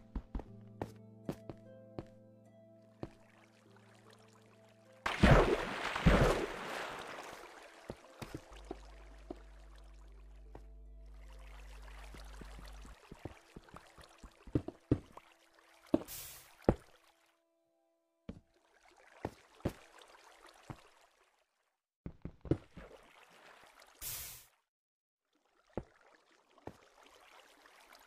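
Mains hum appears from 8.51 to 12.93 s: a steady low drone at 50 Hz, sitting only roughly 15 dB below the signal. A ground loop or nearby transformer has coupled the power-line frequency into the audio path.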